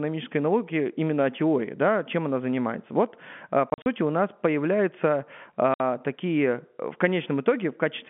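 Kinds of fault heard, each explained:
Packet loss filled with silence: hard-edged holes chop the speech at 3.7–3.86 s and 5.74–5.8 s, where lost packets of about 20 ms were replaced with silence.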